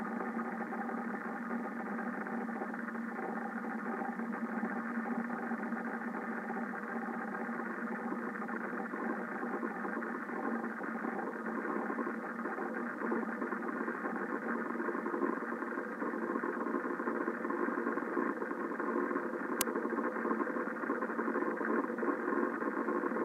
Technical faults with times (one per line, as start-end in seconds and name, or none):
19.61 uninitialised buffer